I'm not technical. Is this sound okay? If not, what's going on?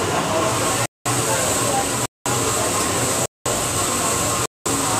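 No. The sound has a gap between chunks. It stops dead for a fifth of a second four times: 0.86 to 1.06 s, 2.06 to 2.26 s, 3.26 to 3.46 s, and 4.46 to 4.66 s. The audio was handled in one-second pieces, with silence left at every join. Nothing is missing; the sound just pauses and resumes, at a steady rhythm you can count.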